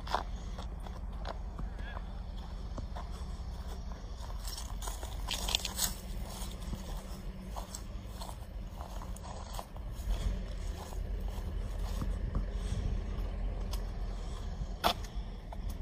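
Frames out of order occur at 0.64–1.03 s, 5.29–5.68 s, 6.50–6.87 s, 9.23–9.63 s and 15.41–15.80 s. Each time, two adjacent blocks of about 186 ms play swapped, consistent with four-frame runs. This gives a garbled flutter and no lost time.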